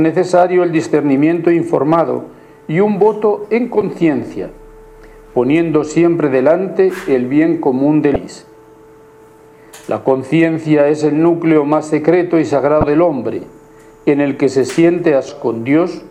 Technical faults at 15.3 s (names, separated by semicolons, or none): damaged data in a compressed stream